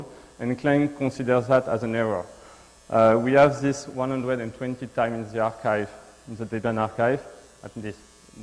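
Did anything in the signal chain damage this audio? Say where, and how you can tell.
No, no stage in the chain damaged this audio.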